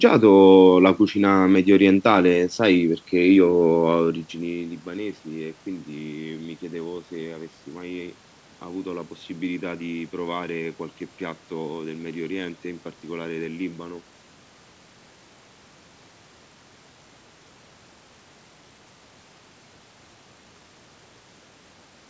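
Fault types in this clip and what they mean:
No technical faults can be heard anywhere in this recording.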